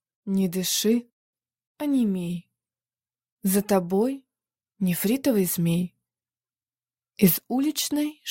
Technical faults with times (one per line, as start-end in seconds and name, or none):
none